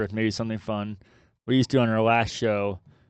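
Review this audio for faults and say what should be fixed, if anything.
Nothing stood out on listening to this speech, so there is nothing here that needs fixing.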